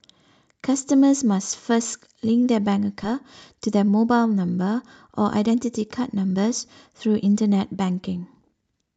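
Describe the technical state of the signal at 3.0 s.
At 3.03 s there is a skip ahead: about half a second of the speech never reaches playback, most likely discarded when the jitter buffer overflowed while later audio was already queued. The sound jumps straight from one point to a later one with no silence and no filler, so the two sides butt together and the speech seems to lurch forward. A dropout would leave an audible hole; here nothing is inserted, only the missing material betrays the cut.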